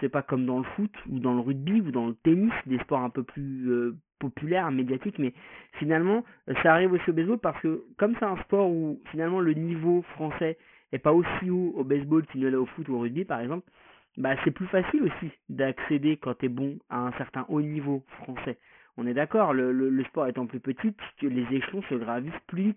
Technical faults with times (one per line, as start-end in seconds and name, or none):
0.00-22.76 aliasing